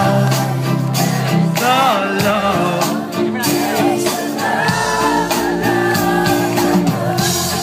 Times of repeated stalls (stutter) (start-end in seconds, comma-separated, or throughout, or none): none